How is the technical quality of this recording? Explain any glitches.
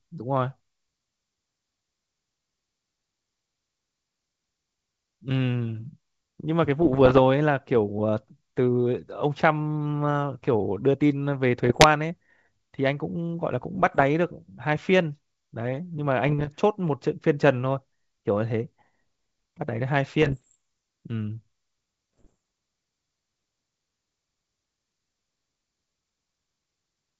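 The speech comes through a wideband G.722 link, clear up to about 7 kHz, but it is broken by six short bursts of bit errors on an ADPCM link. They fall at 6.82–7.19, 11.64–11.87, 13.75–14.04, 16.26–16.49, 20.22–20.57 and 22.17–22.34 s.

Flipped bits, at a rate of around one percent or less, knock the decoder's step size and predictor off track. Each error therefore rings on for milliseconds, heard as pops and rough, gritty bursts with brief level jumps. A waveform shows spiky excursions and uneven amplitude, and a spectrogram shows vertical broadband streaks.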